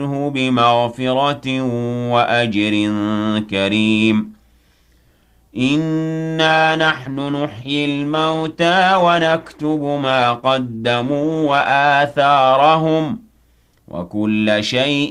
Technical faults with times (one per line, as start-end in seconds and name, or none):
6.47-12.47 adaptive stream at a lower bitrate